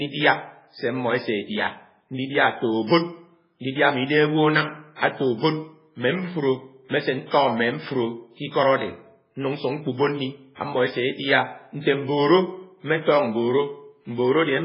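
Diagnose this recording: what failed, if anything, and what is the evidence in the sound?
The codec stage has failed: the whole speech recording carries heavy damage from what is likely MP3 compression. Nothing reaches above 5.2 kHz, so sibilants lose their edge, and the remaining spectrum has a watery, swirling texture with smeared consonant onsets. That fits a very low bitrate of around 16 kbps. The encoder lacked the bits to code the treble, so it cut everything above a fixed frequency and dropped weak spectral lines that flicker between frames.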